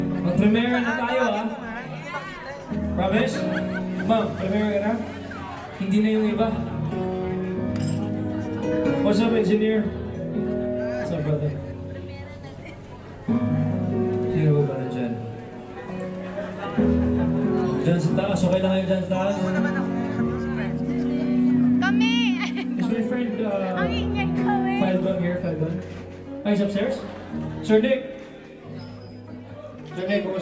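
Nothing here stands out as a technical fault; the audio runs along without any glitch or disturbance worth pointing to.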